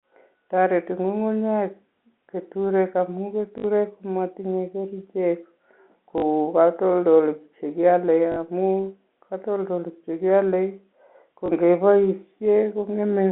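Packet loss with the last packet repeated occurs at 3.58–3.64 s, just before "matinye kerichek"; at 6.18–6.22 s, before "katoldolik che kiale amu"; at 8.32–8.36 s, between "katoldolik che kiale" and "amu katoldolik che kiale"; and at 11.46–11.48 s. Audio went missing and the receiver replayed the last chunk until new audio arrived. The longer runs buzz at about 50 Hz, which fits 20 ms packets, giving a brief robotic stutter.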